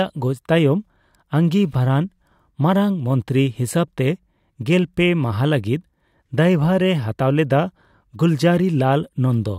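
No technical faults can be heard anywhere in this speech recording. Nothing stands out as a glitch, dropout or distortion at any point.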